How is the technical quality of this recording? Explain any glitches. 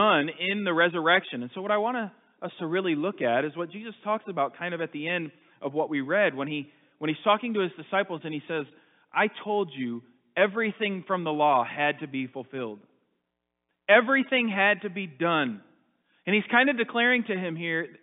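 No glitches; there are no faults here to explain.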